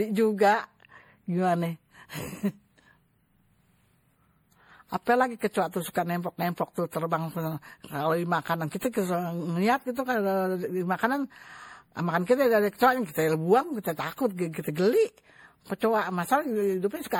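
Throughout the speech, the sound is swirly, smeared and hollow. Attacks blur, and consonant onsets lose their edges. The fault is generation loss. The likely cause is repeated lossy coding, with the audio decoded and re-encoded roughly seven times. The character points to MP3 at around 64 kbit/s. Each pass quantised on a shifted frame grid, so noise and spectral holes piled up. Nothing sits above 20.8 kHz.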